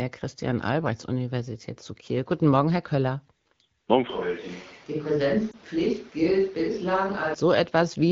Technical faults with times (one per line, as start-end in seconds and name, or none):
4.10-7.34 switch to a distant microphone
5.51-5.56 lost AMR speech frames